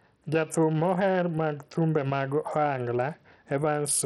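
From the first moment to the last, the speech has a gritty, grainy edge, and the top end feels starved, with nothing at all above about 12.4 kHz. That's most likely Bluetooth SBC compression working with a tight bit budget, something like 64 kbps. The encoder starves the upper sub-bands and quantises the rest coarsely, so the damage here is heavy: the treble is thinned and unstable, with a rough noise layer and aliasing clinging to the sound.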